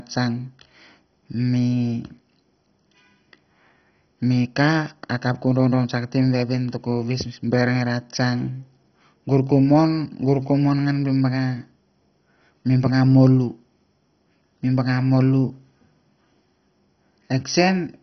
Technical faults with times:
0.00-18.02 MP2 compression

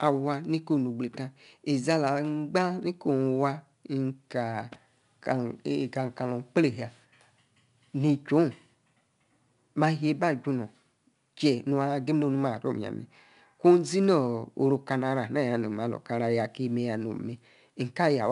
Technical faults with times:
0.00-18.31 4-bit ADPCM compression

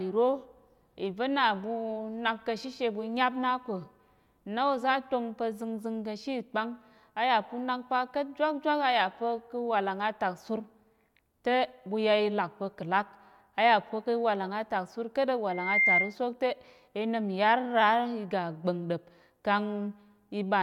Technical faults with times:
15.49-16.15 loudspeaker feedback squeal

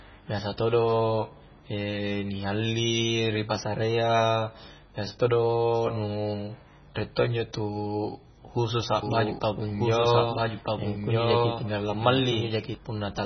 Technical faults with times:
0.00-13.26 MP3 compression
9.03-12.75 doubled audio track

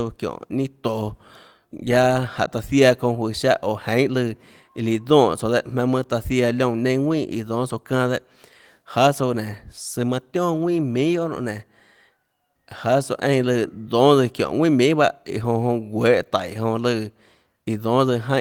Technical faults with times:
none

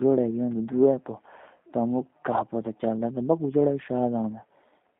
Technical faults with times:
0.00-4.99 G.729 codec

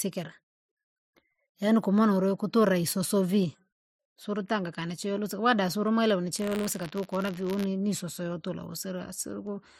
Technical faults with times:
6.34-7.65 buffer tearing

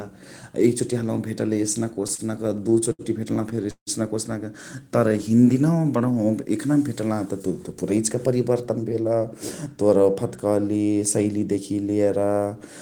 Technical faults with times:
1.93-3.90 repeated stalls (stutter)
4.76-5.41 jitter buffer slow-down
7.26-8.95 jitter buffer speed-up

